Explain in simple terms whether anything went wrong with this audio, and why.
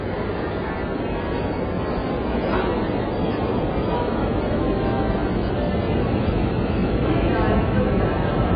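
Throughout the recording, nothing is heard above about 5 kHz, so the sounds come across dull and muffled, with a smeared, fizzy texture. This is likely AAC compression, squeezed so hard that the encoder discarded the treble and roughly approximated the rest.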